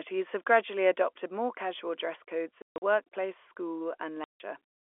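From 0.28 to 0.57 s the loudest stretch of speech takes on a hard, crackling edge: the waveform's tops are flattened, with peaks pushed about 3 dB past the converter's limit, though only a small fraction of samples, under one percent, are actually cut. This is likely microphone overload at the converter. It differs from codec distortion because the harshness tracks only the peaks and vanishes as soon as the level falls.

At 1.02 s the whole signal, voice and background together, drops by about 2 dB in a single step and stays there. This is most probably the microphone volume being stepped down by the call software after that distorted peak. Unlike a natural fade or a speaker moving away, the change is instantaneous and affects the noise floor equally.

From 2.62 to 2.82 s there is packet loss filled with silence. About 180 ms of the 200 ms span is missing, in hard-edged gaps, the longest running 140 ms. 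A second dropout from 4.24 to 4.4 s removes about 160 ms outright. Every gap is a multiple of 20 ms, which fits 20 ms packets. Concealment would leave smeared or repeated sound in these holes, but here there is plain silence.

Throughout, the G.711 telephone coding confines the sound to roughly 300 Hz–3.4 kHz.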